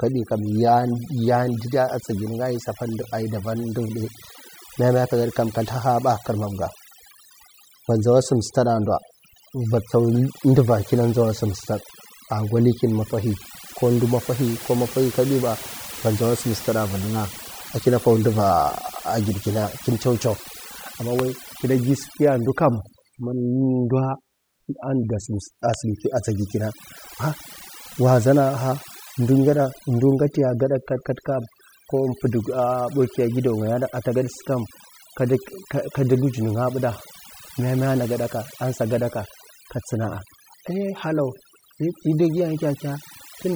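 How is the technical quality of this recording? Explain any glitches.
The recording has one fault, present throughout: overdone noise removal. A noise reducer set too aggressively mutes frequency bands near its noise estimate, leaving near-silent, twinkling gaps and stripping quiet parts of the voice along with the noise.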